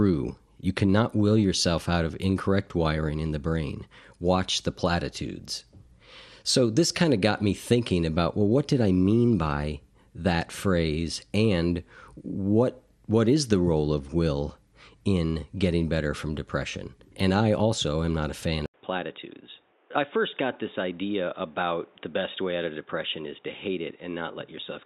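From the start, the speech sounds dull, with a gurgling, grainy edge. This points to MP2 compression, likely at about 80 kbps. With too few bits, upper sub-bands switch off and flicker. The remaining bands are coarsely quantised, so the damage is plainly audible.

At 18.66 s there is an 80 ms silence. Then the input has likely switched to a poorer device. Nothing remains above 3.8 kHz. The level drops by about 5 dB. New background noise sits roughly 30 dB below the speech until the end.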